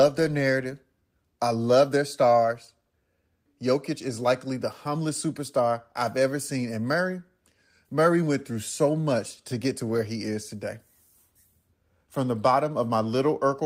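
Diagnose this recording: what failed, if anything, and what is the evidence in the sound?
Nothing in this speech recording points to a failure at any stage, from the analogue wiring through to playback. There is no event in the sound to time or trace back to a mechanism.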